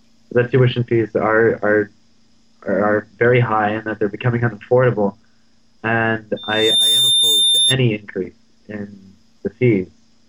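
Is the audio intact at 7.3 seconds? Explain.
No. Loudspeaker feedback squeal runs from 6.36 to 7.78 s: the microphone re-amplifies its own speaker until a 3.6 kHz tone swells over about half a second to roughly match the sound's level.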